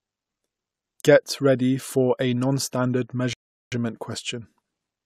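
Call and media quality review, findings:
Rebuffering stall at 3.33–3.72 s: the speech drops to silence for about 0.39 s, then picks up exactly where it left off. Nothing's missing, just time added. Probable component: the player's buffer, which ran dry waiting on the download.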